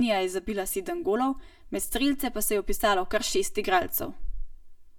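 Speech with channel delay (comb filtering) throughout: one channel trails the other by around 3 ms, so the mono sum sounds hollow and phasey. A spectrogram shows fixed dark horizontal notches, the first near 150 Hz, then repeating roughly every 330 Hz.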